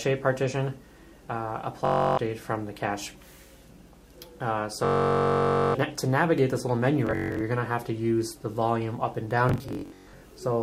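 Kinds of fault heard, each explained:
Bluetooth stutter: packets arrive late or not at all, so the receiver replays its last short slice (about 21 ms, which points to packet-sized units) until data returns, producing a buzzing, machine-gun repeat rather than silence. Here: 1.85 to 2.18 s (320 ms lost), 4.85 to 5.75 s (896 ms), 7.07 to 7.41 s (scattered), and 9.49 to 10.22 s (scattered). Unlike a simple dropout, the sound resumes further on, as if it had kept playing.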